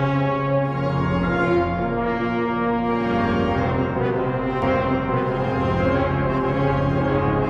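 At 4.62 s a doubled audio track begins abruptly and runs to the end of the clip. A second full-band copy of the sound trails the original by about a second, at roughly the same level, with no decay or room colouring, so it reads as a hard, flat repeat rather than an echo. The likely cause is the same signal being captured again through a slower path, or an edit leaving two copies out of step.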